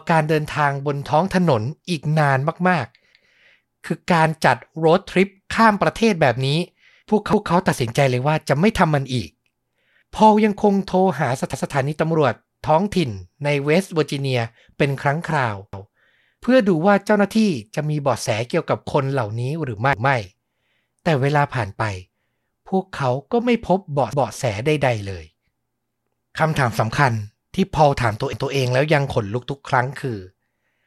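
Speech with overlapping chunks: roughly every 4 s, a 200 ms piece replays as a stutter at 3.1, 7.3, 11.5, 15.7, 19.9, 24.1 and 28.3 s.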